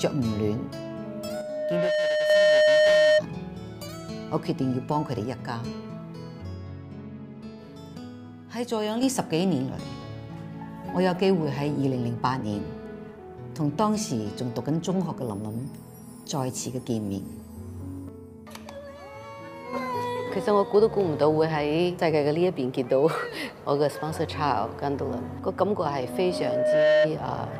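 The audio has two problems. There's loudspeaker feedback squeal from 1.05 to 3.23 s and again from 25.89 to 27.11 s: a 611 Hz tone that swells over roughly a second until it sits around 10 dB above everything else, the classic sign of a mic hearing its own speaker and the loop running away at that frequency. Separately, the level suddenly sinks by about 6 dB from 1.41 to 2.30 s, 7.97 to 9.03 s and 18.09 to 19.73 s, then snaps back. That drop is most likely one stereo channel dropping out, so the mono sum loses half of what both sides shared.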